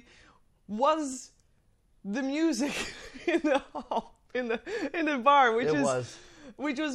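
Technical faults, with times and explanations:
1.13 s and 2.94 s: dropped samples. Two isolated sharp clicks in the speech, the second just after "the music". Each is an instantaneous step in the waveform rather than an audible gap, far too brief to remove any sound, and appears as a thin vertical line across the spectrum. The likely cause is a tiny run of samples, well under a millisecond's worth, missing from the stream, so the signal jumps directly to a later value.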